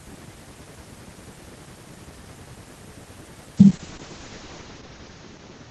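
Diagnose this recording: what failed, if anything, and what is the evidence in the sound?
From 3.58 s to the end of the clip at about 5.71 s, the speech turns rough and watery and loses its top end, sounding muffled. This is a call bitrate drop at the network and codec stage. The bandwidth estimate fell, so the encoder went from 32 kbps down to 7 kbps and held the lowest rate for about 1.04 s. At that rate the coding is coarse, and the audio bandwidth narrows from 20 kHz to 8 kHz.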